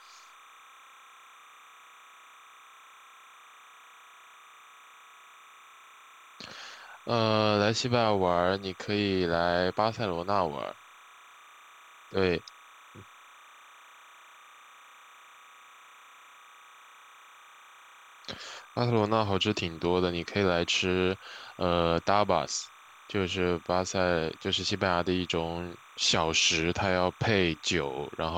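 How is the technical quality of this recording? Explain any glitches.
The speech carries a constant interfering tone from start to finish. Throughout, a steady chirping warble sits about 25 dB under the speech: timecode bleed, a square-wave code near 1 and 2 kHz leaking across, fitting 29.97 fps timecode.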